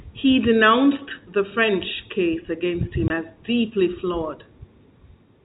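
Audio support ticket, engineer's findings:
Packet loss filled with silence, 3.08 to 3.10 s, between "case against him" and "as deeply". Symptom: a 20 ms dropout with hard edges. Probable component: network path or receiver jitter buffer. Mechanism: a gap that fits exactly one 20 ms packet never arrived; the receiver played silence instead of concealing it, so the waveform cuts to silence and back abruptly. The G.711 telephone coding on the line, audible as the 4 kHz band limit, is not involved.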